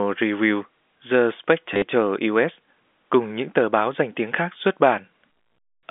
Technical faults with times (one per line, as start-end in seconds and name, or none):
1.74-1.82 packet loss with last packet repeated